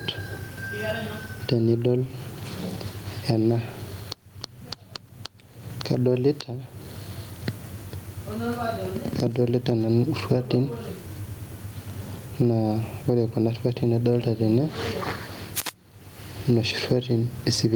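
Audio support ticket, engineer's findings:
Gain pumping, whole clip: loud and soft parts pulled closer in level; level swing around 15 dB, delivery squashed. Likely cause: input gain set far too high, fast limiter/compressor clamping on every peak, recovering in gaps.

Wireless microphone noise hit, 15.54–15.75 s: short swish of static for about 0.2 s. FM receiver noise rising as the radio signal fades, reflections cancelling at the antenna. Room noise sits about 43 dB below speech.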